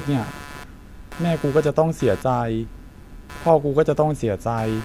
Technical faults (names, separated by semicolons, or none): computer activity noise